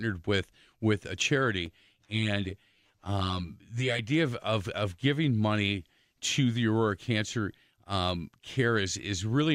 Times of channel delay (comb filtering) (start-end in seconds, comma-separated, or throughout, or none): 1.66-3.99